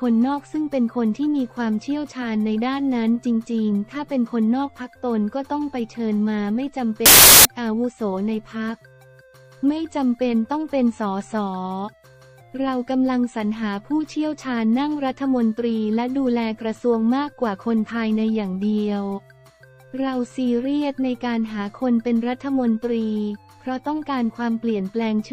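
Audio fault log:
7.06–7.45 s, wrong sample width: a harsh burst of loud noise, with the underlying sound faintly audible inside it, running about 1.33 times too fast and pitched up by roughly a third. The audio here points to packed 24-bit samples being read as 32-bit ones. Each value is assembled from bytes belonging to neighbouring samples, so only some keep the real signal's top bits. Consuming four bytes per sample instead of three shortens the passage.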